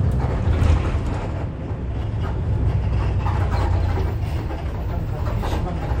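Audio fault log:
2.03 s, 3.65 s and 4.80 s: compressed frames skipped. Each is a brief smeared blip where the sound jumps forward, by about 150 ms at the first two and about 300 ms at the last. Whole compressed frames went unplayed, and the jumps fit roughly five and ten 26.1 ms frames. Overlapping neighbour frames blur each join instead of producing a click.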